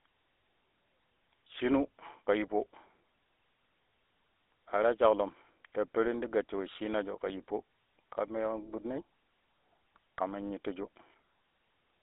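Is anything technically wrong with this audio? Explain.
Yes. GSM full-rate codec damage runs throughout the speech. The codec rebuilds the vocal tract and drives it with a sparse, regularly spaced pulse excitation at a rate that fits 13 kbps, leaving a plainly audible buzzy, gravelly roughness, with the band confined to 300 Hz to 3.6 kHz.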